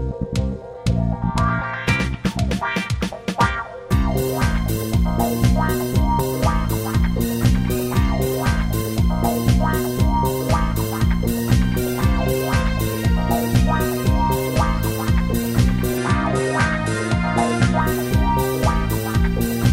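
The input likely switched to a poorer device from 15.98 to 17.81 s. Sound above 11.4 kHz vanishes, and a faint new background noise appears, with no gap or level jump.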